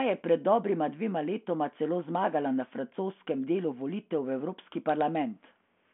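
Nothing stood out on listening to this speech, which comes through a telephone-band G.726 ADPCM path at 40 kbit/s with nothing heard above about 3.8 kHz.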